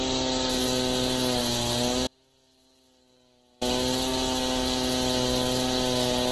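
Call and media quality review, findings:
Grainy, rough texture throughout, highs hazy and noise-filled rather than swirly, nothing above 12.1 kHz. Likely Opus compression, music (CELT) mode at about 12 kbps: heavy bit starvation, band energies kept but detail replaced by folded or noise-filled content, bandwidth capped.

Abrupt cut at 2.07 s, sound returns abruptly at 3.61 s. Gap of 1.54 s holds only a faint leak of the signal, about 35 dB below normal. Audio dropout to a faint residue: signal path likely broke while downstream stayed live, no fade.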